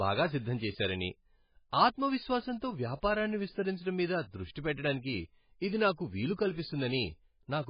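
MP3 compression artefacts run through the whole clip, from start to finish. Nothing is present above 5 kHz, and the heavy damage points to a very low bitrate, around 16 kbps. The likely cause is an MP3 encoder that ran so short of bits that it cut the treble at a fixed frequency and discarded weaker frequency detail. The speech sounds dull and watery, with swirling, warbling textures, and consonant onsets sound smeared rather than crisp.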